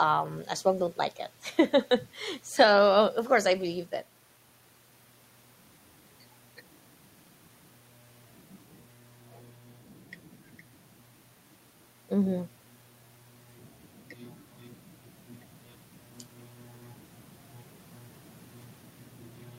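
The signal carries no audible technical faults at any point in the recording.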